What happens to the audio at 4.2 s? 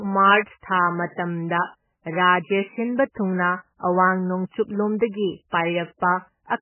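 Likely MP3 compression, running throughout and including 4.2 s: starved of bits, the encoder cuts everything above 3 kHz and drops weak components, so the speech sounds watery and muffled.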